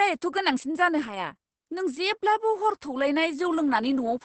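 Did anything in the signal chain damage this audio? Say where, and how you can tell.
Yes: the damage comes from the codec stage, where Opus voice compression was run at a very low rate across the whole speech clip. Nothing survives above 8.5 kHz, which fits the SILK linear-prediction coder in wideband mode at roughly 10 kbps. At that rate the excitation is coded coarsely, so the speech sounds muffled, hoarse and slightly robotic from start to finish.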